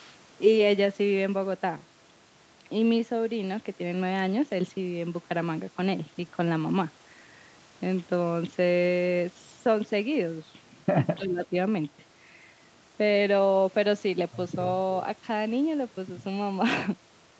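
Speech that dips sharply between 11.17 and 11.55 s, roughly 15 dB down for about a third of a second, is likely speech suppressed in double talk: the echo canceller, unable to separate this talker from returning loudspeaker echo, turned both down. The level is pulled down rather than cut to digital silence, which sets it apart from a packet dropout.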